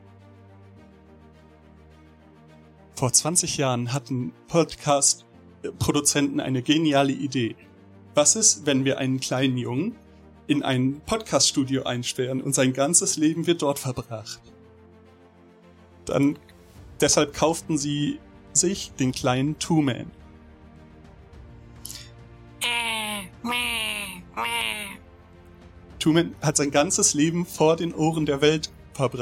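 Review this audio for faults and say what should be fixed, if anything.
No technical faults are audible here; nothing needs fixing.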